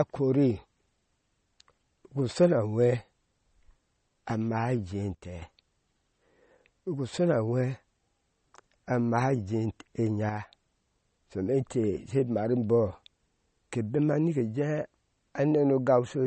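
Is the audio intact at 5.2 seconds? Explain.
No. From 5.15 to 5.42 s a sudden gain jump drops speech and background together by about 8 dB, likely an unramped digital gain change. The waveform shows a step in its envelope.

The speech also carries plainly audible MP3 compression, sounding watery and swirly, with nothing above 8.4 kHz, which likely fits about 32 kbps. On a spectrogram this appears as a flat ceiling with flickering gaps.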